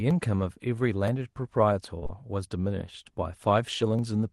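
Clock drift buffer slips run from 0.11 s to 3.99 s as a regular click repeating every 0.97 s, about five in all. Two independent clocks roughly 700 ppm apart are the likely cause, letting a buffer creep until a small block, around 30 samples, is dropped or repeated.

Short concealed packet loss follows in three back-to-back gaps, from 1.99 to 2.04 s, 2.04 to 2.07 s and 2.07 to 2.11 s, each 20 ms of missing speech. The decoder extended the preceding sound to cover each hole, so this stretch smears and wobbles briefly before the real signal blends back in.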